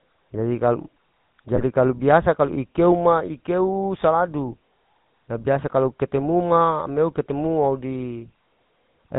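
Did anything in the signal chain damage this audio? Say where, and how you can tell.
Yes. Throughout, the speech has a buzzy, gravelly roughness with nothing above 4 kHz. This is the GSM full-rate codec: a vocal-tract filter driven by a thinned, regularly spaced pulse excitation, a sound that fits 13 kbps.

From 1.56 to 1.72 s there is a burst of squawking and gargling with level jumps. These are GSM bit errors on the network link. Corrupted filter, pitch and gain parameters distort the decoded spectrum and level, and three frames within the 0.16 s span were damaged.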